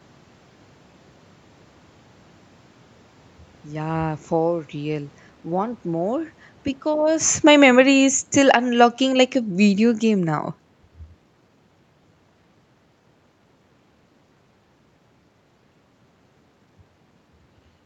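From 6.87 s to 10.47 s the automatic gain control is falling. Having judged the input too loud, or its background noise too strong, it eases its gain down by about 7 dB over roughly three and a half seconds, so the voice and the room noise behind it sink together rather than the voice alone fading, which separates it from the talker shifting position around 7 s. On a waveform the envelope tapers steadily across that span; on a spectrogram every band, including the noise floor between syllables, dims in step.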